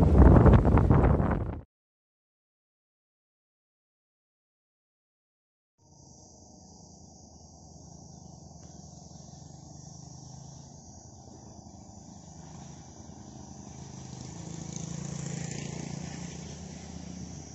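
No audible technical faults in this recording.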